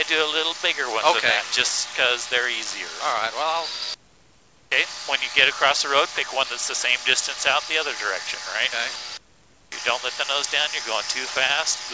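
No technical faults occur at any point in the audio, which carries nothing above 8 kHz, as expected of a wideband call path.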